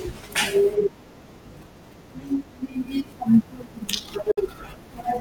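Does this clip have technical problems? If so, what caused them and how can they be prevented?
Yes. A Bluetooth dropout silences the speech from 4.31 to 4.38 s, with about 56 ms of sound missing. Playback then resumes as though it had continued underneath. The likely cause is wireless packets reaching the headphones too late and being discarded, and a gap this long fits roughly three lost packets. Keeping the headphones close to the source and away from wireless interference prevents this.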